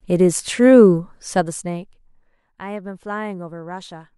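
No technical faults are audible.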